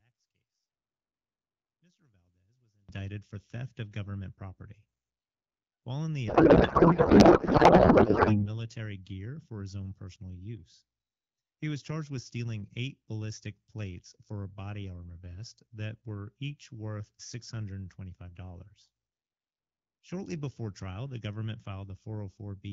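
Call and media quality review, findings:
0.00–2.89 s, before "for theft of government": sound drops by about 32 dB to a faint residue. Likely one channel inverted, with common content cancelling in the mono sum. Unlike a plain gain drop or mute, a faint difference signal remains.

6.28–8.47 s, between "in the" and "gear for his own": codec payload misread. Garbled warble barely tracking the speech. Octet-aligned AMR frames parsed as bandwidth-efficient, so the fields land in the wrong places. Unlike packet loss, there are no gaps or concealment fades; the garble is continuous.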